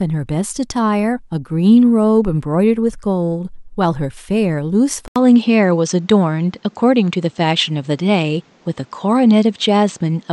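At 5.08 s there's an 80 ms gap, and from then to the end the speech turns duller, with nothing above 8.3 kHz and a faint new noise floor about 40 dB down at much the same level. That's likely the input switched to a poorer device.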